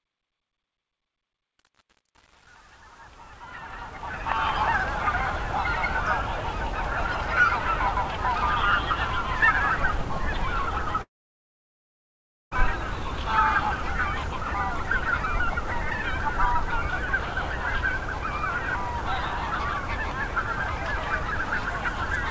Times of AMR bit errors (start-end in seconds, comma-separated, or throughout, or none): none